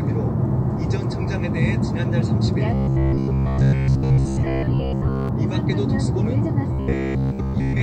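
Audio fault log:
2.74–5.29 s and 6.73–7.82 s, robotic sound from repeated short buffers: audio likely arrived too seldom, so repeated 15 ms chunks replaced most of it, forcing a rigid metallic 66.7 Hz buzz.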